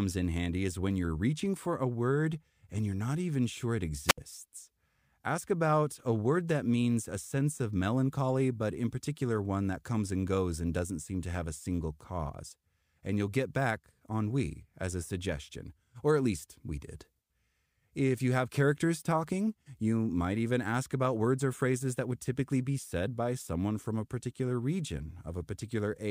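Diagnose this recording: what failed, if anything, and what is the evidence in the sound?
The wireless microphone link failed in a wireless microphone squelch dropout. This is the analogue radio stage, ahead of the converter. From 4.07 s to 4.18 s the speech gives way to a short rise of hiss and then a hole of near silence about 69 ms long. After that the speech comes back. The FM signal faded and the noise in the receiver rose. The receiver's squelch then shut off the output until the carrier was strong again.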